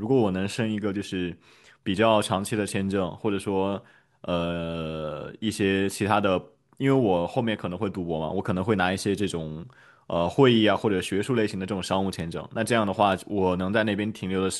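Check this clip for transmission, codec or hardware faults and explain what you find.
Two bit error spikes at 12.2 s and 13.12 s. Each is a flipped bit that throws one or two samples by a power of two, producing a sharp broadband tick, peaking around -24 dBFS and -18 dBFS.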